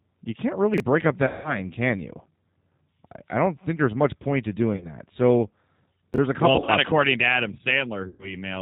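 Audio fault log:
throughout: G.729 codec. The speech is coded at 8 kbit/s as a vocal tract filter and sparse pulses, so nothing above 4 kHz passes and speech sounds plainly rough and synthetic.
0.74–0.80 s and 6.14–6.18 s: chunks out of order. 20 ms chunks play late by two and then by one chunk, the second just before "a couple". Hard joins give brief jumbled moments.
1.27–1.60 s, 4.74–4.87 s, 6.56–6.71 s and 8.08–8.30 s: VoIP packet loss concealed by the speech codec. The decoder fills 170, 50, 90 and 110 ms of lost audio by stretching its last pitch and filter into a fading buzz or coloured noise. The second gap follows "there's much point to", and the third falls between "a couple" and "options according to".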